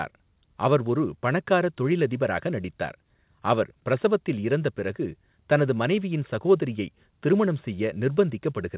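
Speech recording with no technical faults to report.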